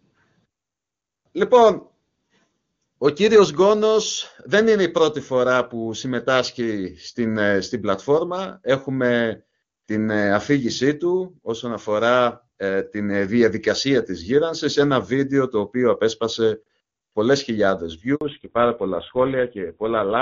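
Right after "οποίο απέσπασε πολλές χιλιάδες", at 18.15 s, there's a handover gap: the call gets passed from one network to another, and for about 60 ms, up to 18.21 s, no speech frames make it through. The voice cuts off quickly and there's a short hole of silence until the new link picks up. Whatever was said in that sliver is gone.

From 18.21 s to the end there's a fallback to narrowband. Up to that point the speech has the open, airy top end of HD Voice, which fits AMR-WB running at its top rate with hardly any codec damage. After the switch, everything above 4 kHz disappears. The voice goes duller and rougher, which points to an older codec along the lines of GSM full rate.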